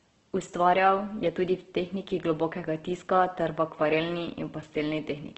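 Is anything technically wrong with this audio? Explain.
Yes. Opus compression runs throughout the speech: nothing is present above 8.1 kHz, and the tone sounds rough and grainy rather than swirly. Likely cause: Opus music-mode coding at a low rate, fitting about 12 kbps, filling starved bands with folded or noise-like content.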